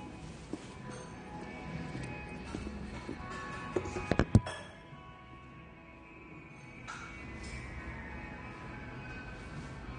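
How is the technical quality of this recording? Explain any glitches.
Technical quality is poor throughout. The whole clip sounds dull and smeared, with nothing above about 9.7 kHz and a warbling, fizzy texture on sustained and noisy parts that is plainly audible. This is likely AAC compression, AAC-LC at a low bitrate, around 32 kbps. With so few bits, the encoder cuts the top of the spectrum and coarsely quantises what remains, leaving gaps and smearing that come and go frame by frame.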